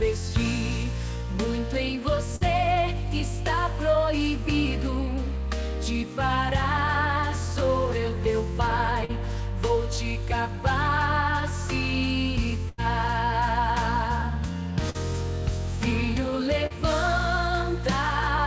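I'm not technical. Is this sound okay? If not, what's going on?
No. Five times in this recording, parts of the sound failed to reach the listener's end in time, and the receiving system patched over the gaps.

The first problem is a burst of packet loss, at about 2.36 to 2.44 s, 12.69 to 12.81 s and 14.90 to 14.97 s. Each time, a small run of the sound went missing on its way. The receiver kept the last bit of sound going and let it fade for roughly 50 ms at 2.36 and 14.90, and about 90 ms at 12.69. The result is a short held buzz or fading hiss. Then the sound jumps ahead, and a slice (40 to 80 ms) is simply gone.

The second is short concealed packet loss, at about 9.05 to 9.12 s and 16.66 to 16.73 s. A few hundredths of a second arrived too late, and the receiver filled the hole by imitating the sound just before it, then blended back in. You hear a brief smear or wobble, and a very short sound there can disappear.

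All of this came through a call-style connection, which removes everything above 8 kHz.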